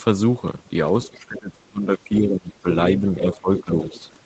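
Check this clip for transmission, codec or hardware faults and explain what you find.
Two echo-control faults affect this speech. They sit on a call path whose top end stops at 8 kHz, which fits Opus at around 20 kbps.

Other side's voice leaking through, at 1.03–1.09 s, 3.19–3.37 s, 3.56–3.64 s and 3.83–4.01 s: scraps of a second voice slip in. This is likely loudspeaker sound the echo canceller left in the microphone signal. The scraps sit about 25 dB under the talker at their quietest and rise to about 10 dB below near 3.6 s.

Speech suppressed in double talk, from 1.1 to 2.66 s and from 3.0 to 3.93 s: with both sides talking, the canceller likely could not separate its own talker from the echo and turned everything down. The voice sinks by up to about 25 dB in the first stretch and about 15 dB in the second.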